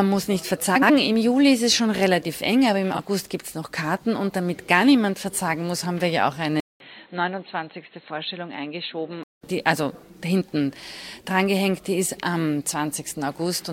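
A garbled flutter at 0.75–0.90 s, and a briefer one at 2.94–3.00 s: frames out of order, with neighbouring runs of about 70 ms and 23 ms swapped.

At 6.60 s, after a 200 ms gap, the sound turns dull and boxy with nothing above 4.2 kHz, a level about 5 dB lower and a new noise floor, until 9.43 s. The likely cause is the input switched to a poorer device.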